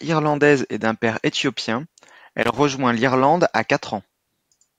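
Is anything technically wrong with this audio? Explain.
Yes. From 2.42 to 2.60 s, just after "et d'un père éthiopien", there is loose connector crackle. A worn or dirty contact in the signal chain is making and breaking as it shifts, so the speech is chopped on and off many times within that short span, and each break and reconnection of any DC on the line adds a pop. The result is a brief, irregular burst of scratchy crackle lasting under a fifth of a second.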